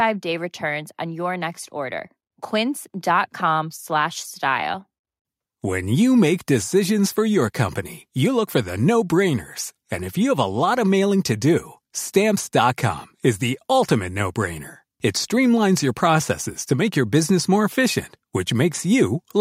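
No technical faults can be heard anywhere in the recording.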